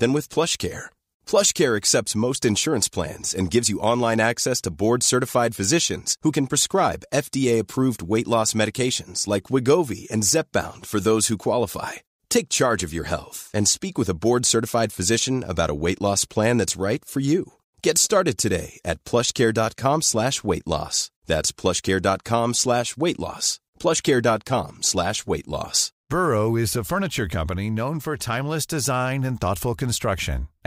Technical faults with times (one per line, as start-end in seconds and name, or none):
none